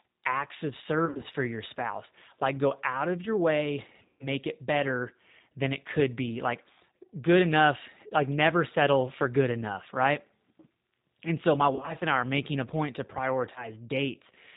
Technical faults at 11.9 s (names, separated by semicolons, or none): G.729 codec; VoIP packet loss concealed by the speech codec